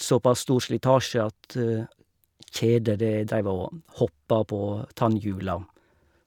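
Nothing in this bit of speech points to a technical fault; every moment of it sounds just as it should.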